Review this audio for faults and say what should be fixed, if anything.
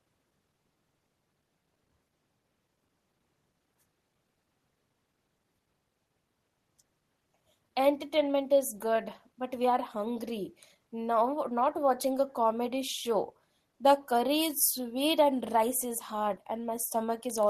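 Listening through the speech, nothing stood out that would need fixing.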